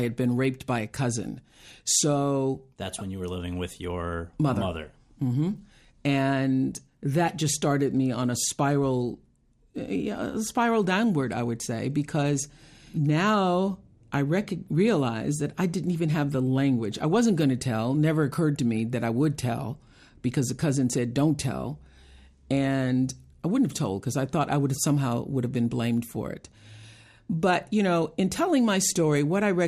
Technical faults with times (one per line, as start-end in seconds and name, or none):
0.00-29.67 MP2 compression